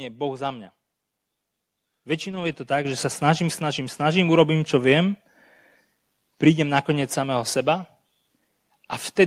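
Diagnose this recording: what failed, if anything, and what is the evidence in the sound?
From 2.31 to 2.53 s the speech turns rough and grainy but never drops out. This is a lost packet rebuilt from error correction, a network-stage loss concealed by the codec. About 120 ms of audio came from the low-bitrate redundant copies that Opus carries in the following packets, which fits roughly six separate 20 ms packets. The decoder played those coarser copies in place of the originals, so there is no gap, only the rougher, noisier texture.

At 2.85 s the speech and the background noise jump up together by about 7 dB in a single step, with no fade. This is a microphone volume step-up in call processing. The call software judged the input too quiet and raised the device's input gain at once. Because the change happens before encoding, everything the microphone picks up gets louder by the same amount, which is why the noise floor rises along with the speech.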